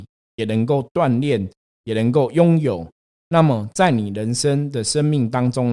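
There are no technical faults to describe at any point in the clip.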